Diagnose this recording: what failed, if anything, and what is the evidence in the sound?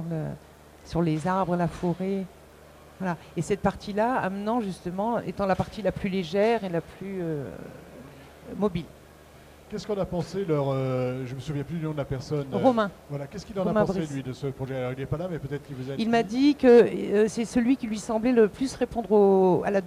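Video or display buzz runs throughout the recording, a steady buzz at 75 Hz with a layer of hash above it, sitting roughly 30 dB below the signal. This is an analogue wiring fault: a monitor or video cable is coupling its field-rate interference into the audio path.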